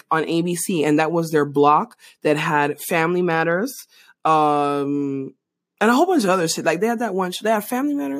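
No technical faults can be heard at any point in this speech recording, and the signal holds steady throughout.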